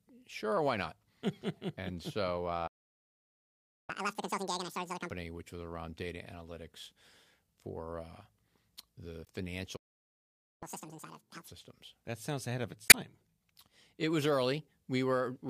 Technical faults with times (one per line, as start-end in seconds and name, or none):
2.67-3.90 playback stall
3.90-5.11 catch-up at higher speed
9.24-9.29 damaged data in a compressed stream
9.76-10.63 playback stall
10.63-11.48 catch-up at higher speed
12.87-12.95 damaged data in a compressed stream